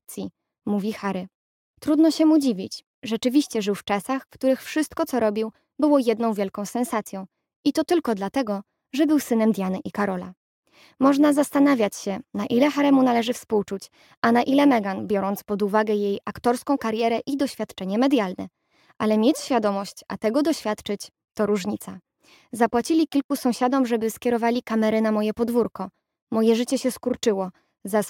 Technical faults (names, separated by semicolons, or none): periodic clock jitter